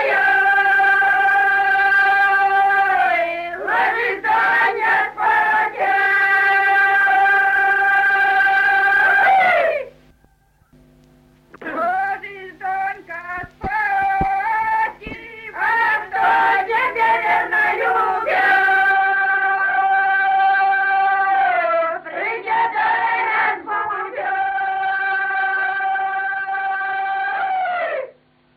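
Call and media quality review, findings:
Sound turns dull and narrow from 18.92 s to end, nothing above 4.6 kHz, faint new background noise, no gap or level jump. Likely input switched to a poorer device.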